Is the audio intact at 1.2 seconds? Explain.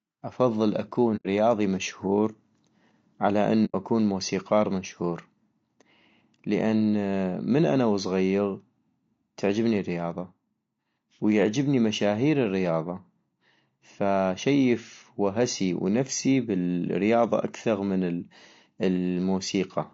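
No. Just after "افضل تكون" the speech drops into a soft-edged gap from about 1.16 to 1.26 s. The sound fades out, stays silent and fades back in. This is AAC frame loss with muting. Frames went missing, the decoder zeroed their spectrum, and the overlapping windows smoothed the edges into gentle fades. The roughly 90 ms of missing audio fits about three lost frames.

Around that gap, and throughout the clip, the speech sounds rough and grainy. Noise fills the spaces between the harmonics and the top band sounds thin and synthetic. The likely cause is low-delay AAC compression of the AAC-ELD kind used in video calls. Its short frames resolve pitch harmonics poorly, and the plainly audible damage points to a low bitrate of around 32 kbps.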